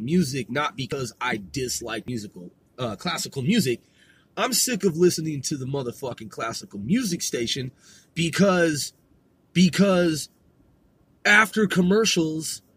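Samples were likely not collected before the hardware overwrote them, causing a dropped buffer (overrun) at 0.92 s, 2.08 s and 5.14 s. Each time the audio skips ahead with no silence, losing roughly 70, 20 and 40 ms.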